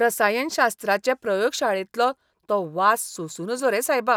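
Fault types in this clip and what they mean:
No technical faults can be heard anywhere in this speech clip. There is nothing in the signal that calls for a fault description.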